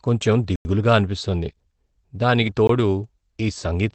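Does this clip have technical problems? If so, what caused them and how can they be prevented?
Yes, two kinds of fault can be heard.

Block of digital silence: the sound drops to silence from 0.56 to 0.65 s (about 93 ms, which fits a 4096-sample buffer) and again from 2.67 to 2.69 s (about 20 ms). The output buffer likely wasn't filled in time, so zeros played instead. The waveform shows a flat line with abrupt edges. The spectrogram shows a black vertical band. Prevention: give the audio thread more headroom or a larger buffer so it never underruns.

Lost packet rebuilt from error correction: from 2.43 to 2.53 s, about 60 ms of audio was lost in transit and replaced by the lower-quality copies carried in the following packets. This Opus in-band forward error correction avoids a gap, but the rebuilt stretch sounds rougher and noisier. On a spectrogram, harmonics there look smeared and the spaces between them fill with noise, with no hole in the waveform. 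The call path's 8 kHz upper limit is visible as a flat top edge throughout. Prevention: reduce packet loss on the network, for example with a steadier connection or traffic prioritisation.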